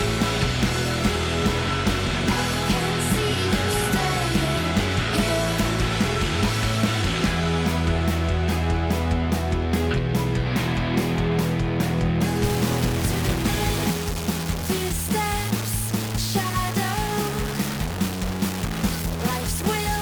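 From 12.44 s to the end, the audio was likely reduced to a very low bit depth without dither, with values truncated rather than rounded. The coarseness points to only about 3 bits. The quantization error therefore tracks the signal, so the sound turns grainy and gritty, with distortion that shifts as the material changes. Quiet passages sputter between adjacent steps or fall to silence. The error sits roughly 10 dB below the signal.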